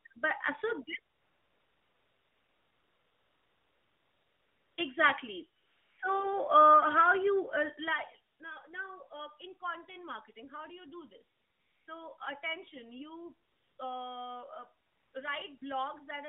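AMR comfort noise fills pauses at 1.14–4.78 s after "uh so this", 5.60–5.98 s before "uh how", 8.34–8.40 s, 11.36–11.88 s between "do you do this" and "attention you", 13.48–13.78 s, 14.86–15.14 s and 15.58–15.62 s. The phone stopped sending speech frames and the receiver substituted smooth synthetic hiss for the real narrowband background, so the noise floor audibly switches texture.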